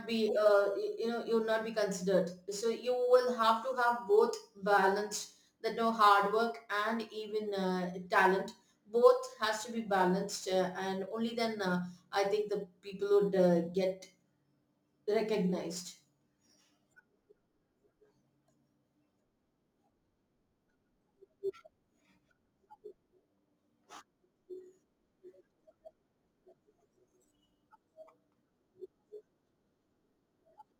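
Speech, affected throughout by crude rate conversion: samples are repeated rather than properly interpolated and filtered, which fits a 44.1 kHz to 48 kHz conversion. The patterned error, roughly 30 dB below the signal, adds a gritty, inharmonic fizz that tracks louder and brighter syllables.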